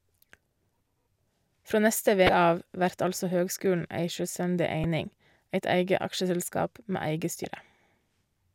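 Three short blips break into the speech, at 2.26 to 2.29 s, at 4.84 s, and at 7.42 to 7.45 s. Each is damaged data in the compressed stream: the decoder hits corrupt bytes, loses sync, and glitches briefly while it hunts for the next valid frame.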